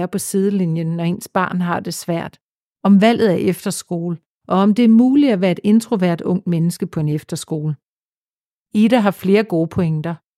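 Nothing in the speech stood out as a technical problem on listening.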